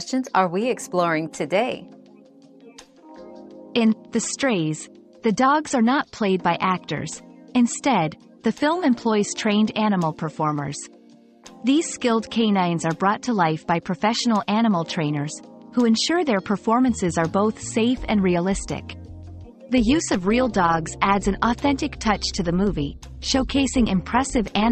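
From 19.78 s to the end at 24.71 s, the audio picks up overlap-add ripple: a metallic buzz around 200 Hz with extra tones around each note, with the level swinging about 6 dB once per frame because the windowed frames were overlapped at a spacing whose gains don't sum flat.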